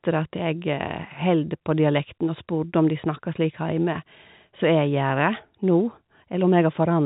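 Nothing here stands out as a fault: the speech comes over a G.711 telephone path that stops everything above 4 kHz and leaves at most a faint noise riding along with the level, which is just how that coding is meant to sound.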